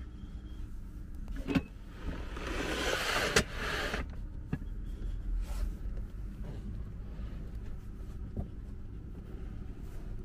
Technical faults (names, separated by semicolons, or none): CD scratch ticks